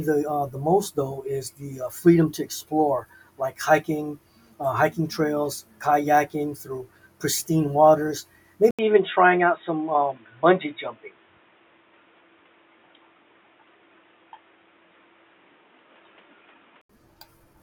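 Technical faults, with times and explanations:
8.71 to 16.89 s, input switched to a poorer device: just after "kayaking through pristine waters" an 80 ms silence opens, then the speech returns dull and boxy with nothing above 3.8 kHz, carrying a new background noise about 40 dB below it at roughly the same loudness. This likely comes from the recording hopping to a narrower-band microphone or headset profile. The gap at the switch and the fresh noise floor with its own tone set it apart from a plain low-pass filter or a codec bandwidth drop.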